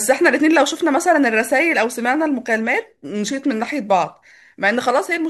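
No technical faults are audible.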